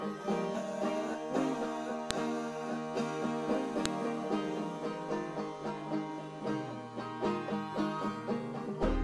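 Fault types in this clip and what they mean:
File header played as audio: sharp, loud snaps at 2.11 and 3.86 s, where joined WAV pieces kept headers whose bytes play as samples.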